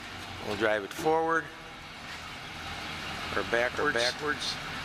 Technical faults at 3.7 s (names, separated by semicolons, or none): doubled audio track